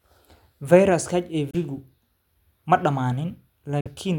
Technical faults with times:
1.51-1.55 Bluetooth dropout
3.80-3.87 Bluetooth dropout

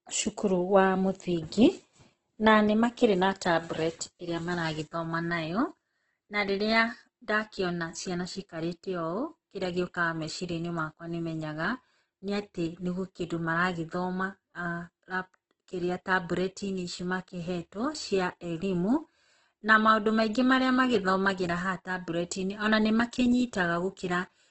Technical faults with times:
0.00-24.50 Opus compression

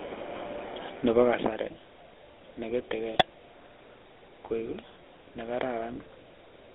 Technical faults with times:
0.00-6.74 GSM full-rate codec
3.14-3.22 GSM bit errors

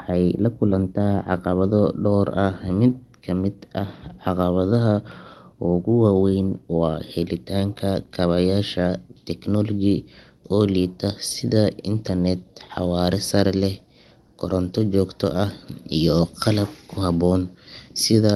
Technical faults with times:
0.00-18.36 clock drift between sender and receiver
0.11-18.12 repeated timing corrections

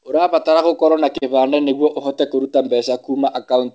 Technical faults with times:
1.18-1.24 short stall from a late packet

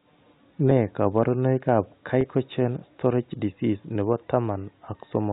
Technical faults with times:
0.70 packet loss with pitch repetition
2.21-2.24 packet loss with pitch repetition

